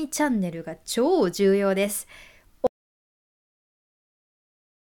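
At 2.67 s the speech cuts off mid-flow and the rest of the clip is silence, with no room tone at all. This is an audio dropout to silence, likely from the input being lost while the recorder kept writing zeros.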